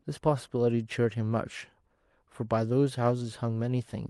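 No technical faults are audible.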